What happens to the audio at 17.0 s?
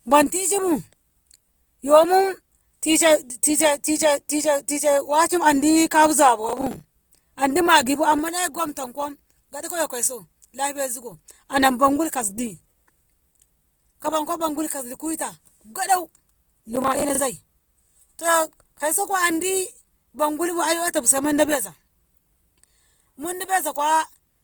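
From 16.76 to 17.20 s there is a burst of processor overload crackle: the processor misses about twenty deadlines on buffers of roughly 10 ms, and each late buffer is filled with repeated stale audio, producing hard-edged fragments heard as gritty, tearing crackle over the speech.

Underneath, as throughout the clip, the speech has a rough, grainy texture with noisy fill in the bands, likely from Opus compression in its CELT music mode at a low bitrate, consistent with around 24 kbps, while bandwidth still extends to about 20.1 kHz.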